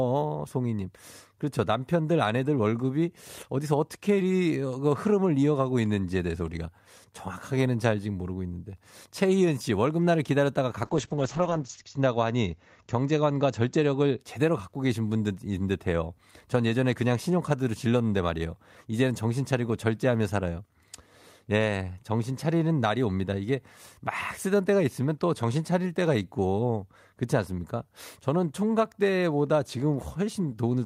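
From 10.84 to 14.25 s, a call bitrate drop from 48 to 8 kbps leaves the speech coarse and muffled below 8 kHz. Unlike packet loss, nothing goes silent.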